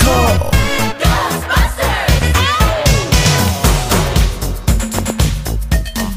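At 3.48 to 3.50 s there is a loud pop, a single sharp click standing about 10 dB above the sound. From 4.99 to 5.12 s comes a double pop, about 15 dB above the sound. The sound continues underneath. A voltage spike, likely from a plug, switch or static, caused both.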